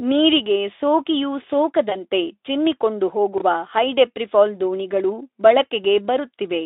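VoIP packet loss concealed by the speech codec occurs at 1.89 to 1.96 s: one 20 ms frame went missing, and the decoder extrapolated from its previous pitch and filter, producing a brief stretched, fading sound that lingers weakly afterward. Chunks out of order follow at 3.38 to 3.41 s: a block of about 11.6 ms plays two chunks late, giving a jumbled moment with hard joins, all heard through the narrowband Speex line.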